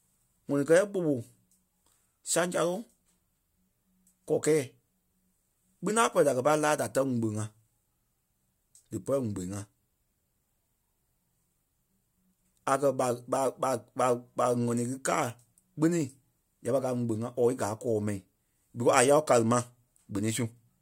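No technical faults can be heard anywhere in the recording; the signal stays continuous and steady throughout.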